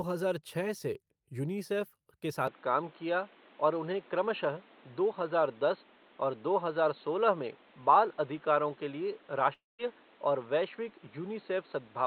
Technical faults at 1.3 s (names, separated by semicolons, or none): none